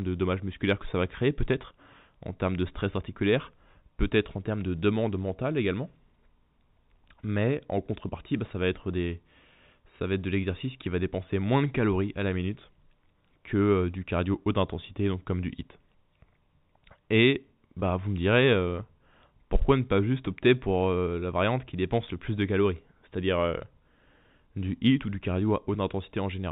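At 17.80 to 17.82 s, packet loss with pitch repetition. About 20 ms of speech drops out, fitting one lost packet. The last pitch period repeats, giving a brief held, buzzy note.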